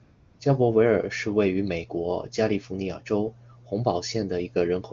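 From 0.03 to 0.39 s, just before "加伯维尔", AMR comfort noise replaces the real background: no speech frames were sent for about 360 ms, so the receiver synthesised a smooth, steady hiss. Unlike a dropout's dead silence, noise stays present but sounds uniform, then switches back.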